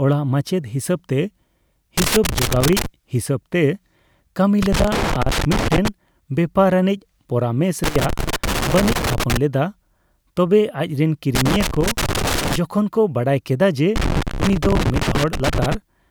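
Loose connector crackle breaks into the speech five times: 1.98–2.86 s, 4.62–5.88 s, 7.84–9.37 s, 11.35–12.56 s and 13.96–15.75 s. A worn or dirty contact keeps opening and closing, chopping the signal into irregular bursts of scratchy crackle lasting roughly one to two seconds each.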